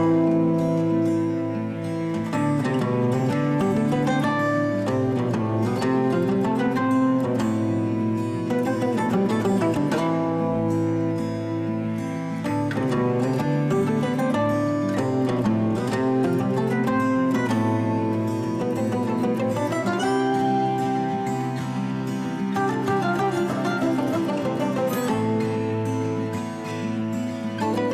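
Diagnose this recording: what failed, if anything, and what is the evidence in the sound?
Nothing failed: across the whole recording there is no audible evidence of trouble at any stage of the chain, from the analogue side and conversion through processing, transport, storage and playback.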